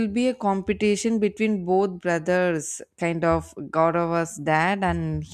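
No technical faults can be heard anywhere in the recording.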